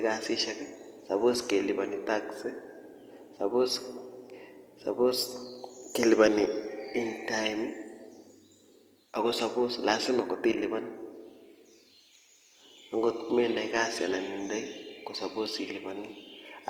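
A speech recording that carries Opus compression damage from start to finish, and it's plainly audible. Rather than the swirly holes you'd get from MP3, the band-filling here makes the voice sound rough and grainy, with a noisy texture in place of clean tone. The top end still reaches about 20.1 kHz, so it isn't muffled. The sound points to the music-oriented mode at a low rate, likely around 24 kbps.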